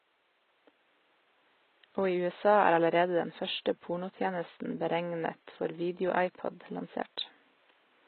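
The speech carries plainly audible HE-AAC compression damage from start to end. The treble is likely rebuilt by spectral band replication. Copied upper harmonics don't line up with the lower ones. S sounds turn gritty and lispy. The damage fits a bitrate near 16 kbps. Faint room noise sits about 41 dB below the speech.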